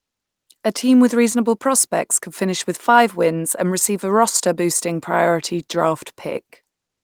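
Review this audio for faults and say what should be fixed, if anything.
Nothing needs fixing, as the speech signal holds steady throughout with no audible technical faults.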